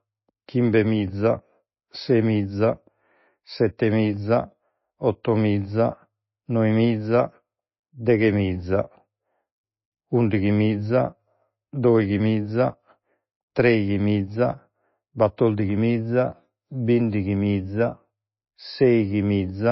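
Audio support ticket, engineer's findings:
Treble gone above 5.8 kHz across the whole speech clip, plus watery, swirly smearing and chirpy s sounds. Likely MP3 compression. The encoder is starved of bits, dropping weak frequency lines frame to frame, which fits a low bitrate around 24 kbps.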